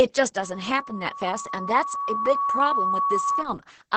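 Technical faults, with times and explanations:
Throughout: Opus voice compression. The speech sounds muffled, hoarse and a little robotic. Nothing is heard above about 8 kHz, which points to the codec's wideband mode. The damage is heavy, consistent with a low rate of around 10 kbps. At that rate the SILK linear-prediction coder keeps only a rough outline of each sound. It codes the buzz and hiss underneath very coarsely, so detail and breathiness are lost.
0.42 to 3.44 s: loudspeaker feedback squeal. A steady tone at 1.1 kHz appears and swells over roughly two seconds. It grows until it is about as loud as the speech, then stops at 3.44 s. A microphone is picking up the loudspeaker it feeds. At 1.1 kHz the gain around that loop is above one. Each pass round the loop makes the tone louder, so it builds by itself into a squeal.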